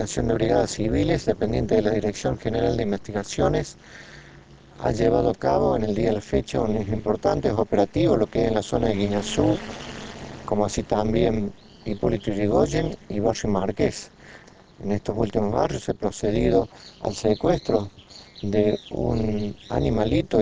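Overlap-add ripple runs through the whole recording, from start to finish. The sound was split into windowed frames and rebuilt with an overlap whose windows do not add up to a steady gain, so the level swings once per frame at a rate of around 200 Hz. The swings are very deep, about 60 dB, which turns the sound into a harsh, metallic buzz rather than a gentle tremolo.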